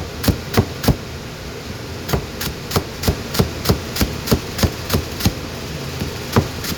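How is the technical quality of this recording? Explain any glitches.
The recording's signal holds steady throughout, with no dropouts, distortion or other technical faults to be heard.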